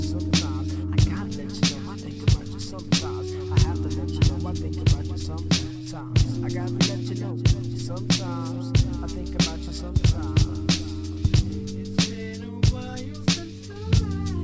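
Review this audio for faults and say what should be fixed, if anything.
Nothing stood out on listening, so there is nothing here that needs fixing.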